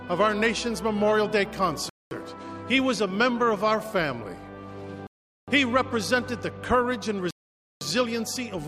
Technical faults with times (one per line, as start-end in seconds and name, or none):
1.89-2.11 Bluetooth stall
5.07-5.48 Bluetooth stall
7.31-7.81 Bluetooth stall